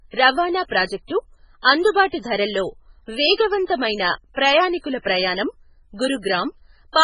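From start to finish the speech carries heavy MP3 compression damage, likely from an encoder starved of bits, with damage this severe pointing to a rate near 16 kbps. Nothing survives above 10.4 kHz, so a spectrogram shows a flat ceiling there, and below it weak components flicker on and off between frames as scattered holes and islands. The result sounds watery and swirly, with metallic chirping on s sounds and softened, smeared attacks.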